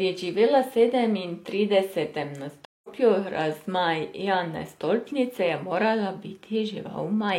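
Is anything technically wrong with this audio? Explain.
Yes. At 2.65 s the speech drops out for 185 ms, then resumes at 2.89 s about a fifth of a second further on. This is a stream reconnect. The connection broke, the player reconnected, and a fresh decoder picked up the live stream later, skipping a short stretch.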